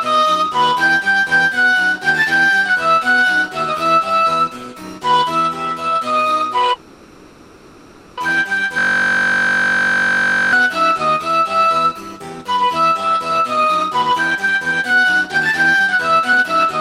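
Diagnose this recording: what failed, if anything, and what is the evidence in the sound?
From 6.73 to 8.20 s the sound stretches into a fading buzz lasting 1.44 s, then resumes where it stopped with nothing missing. This is a call audio freeze, likely from network packets arriving late and draining the jitter buffer. A spectrogram shows a smeared, decaying band.

From 8.79 to 10.53 s a 21.33 ms slice repeats exactly, giving a steady 46.9 Hz buzz. This is a system hang loop at the driver or buffer stage, consistent with a 1024-sample ring buffer. The waveform shows identical periodic cycles, and the spectrogram shows vertical stripes.

From 13.32 s to the end at 16.80 s the audio runs about 8% fast at unchanged pitch and sounds hurried. This is a jitter buffer speed-up in call processing, removing short pitch-period pieces totalling roughly 0.3 s. The spectrogram shows compressed timing with harmonics unshifted.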